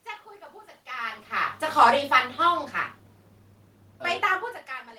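Automatic gain falling from 1.86 s to 4.05 s: the gain control judged the input too loud or its background noise too strong and pulled its gain down by about 6 dB over those two seconds, so the voice and the room noise behind it sink together, unlike the talker's movements near 0.5 s and 4.0 s.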